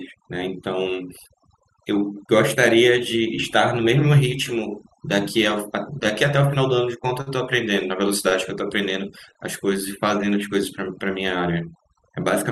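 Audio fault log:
Throughout: overdone noise removal. The background is pushed down, with small twinkling specks where isolated frequency bands flicker on and off around the noise estimate. Quieter components of the speech fell under that threshold and were cut along with the noise. Unlike a low-bitrate codec, the damage tracks the noise floor.
7.21–7.30, 8.29–8.34, 9.33–9.38: short stall from a late packet. At each point a packet arrived late, the jitter buffer ran dry, and the receiver held the last sound in place for about 51 ms, then 22 ms, then 19 ms before resuming exactly where it stopped. A sound is drawn out with a faint buzz or dip, but nothing is skipped and the timing slips later by the same amount. Lost-packet concealment, by contrast, would leave material missing.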